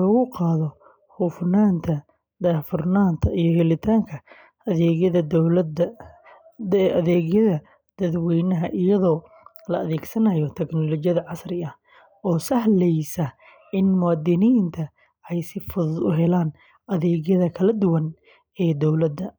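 A speech recording with no technical faults to be heard anywhere in it.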